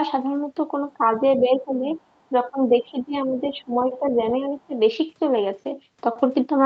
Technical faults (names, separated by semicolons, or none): speech suppressed in double talk; other side's voice leaking through